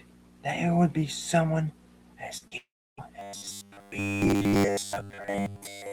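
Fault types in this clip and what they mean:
short concealed packet loss: Two brief smears in the speech, at 2.37 and 2.47 seconds, each about 40 ms long. Both times a few hundredths of a second of audio arrived too late, and the receiver bridged the gap by extending the preceding sound before blending back.
long network dropout: From 2.57 to 2.99 seconds the speech turns into a short fading buzz, then roughly 0.3 seconds of silence, and resumes with that stretch missing. This is likely a network outage of about 0.4 seconds, where concealment ran out and nothing was delivered.
robotic sound from repeated short buffers: From 3.19 seconds to the end the speech becomes a rigid metallic buzz at 100 Hz that only loosely tracks the words. Audio is likely arriving too rarely, so about 10 ms chunks are replayed while most real audio is skipped.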